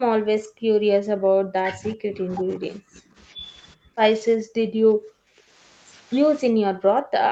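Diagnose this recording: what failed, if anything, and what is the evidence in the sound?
Speech suppressed in double talk occurs at 0.0–3.17 s, 3.35–3.44 s, 3.75–3.98 s, 4.37–5.59 s and from 6.52 s to the end. The speech dips by about 10 dB at 3.35 s, about 25 dB at 3.75 s, and up to about 40 dB in the longer stretches. This stage is call processing. The echo canceller most likely met both sides talking at once, could not separate local speech from loudspeaker echo, and attenuated everything.

Echo leak appears at 2.69–2.77 s and 2.94–3.21 s as a faint, delayed copy of the speech trailing by 368 ms. It sits about 25 dB below the speech in the first scrap and about 35 dB below in the second. The far end likely plays the call on a loudspeaker, and its echo canceller left some of the microphone pickup in place and sent it back. The 368 ms lag reflects the round trip through the call path.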